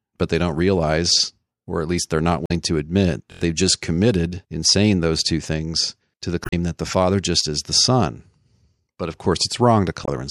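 At 2.44 to 2.51 s, 6.42 to 6.53 s and 10.02 to 10.08 s there is damaged data in the compressed stream. Corrupted frames throw the decoder out of sync while it hunts for a valid header, leaving a brief chirp, squawk, click or short hole each time.

At 3.32 to 3.41 s a repeated buffer appears. A 23.22 ms block, which fits a 1024-sample buffer, plays four extra times because fresh audio arrived late. The result is a hard-edged stutter that replaces roughly a tenth of a second of sound.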